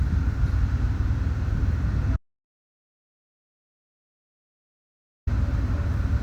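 The input likely lost its signal, leaving an audio dropout to silence in this everyday-sound clip: from 2.16 to 5.27 s, 3.1 s of sound vanishes into dead silence with no room tone.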